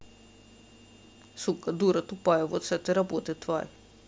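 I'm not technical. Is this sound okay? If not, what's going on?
Yes, nothing wrong can be heard in this recording.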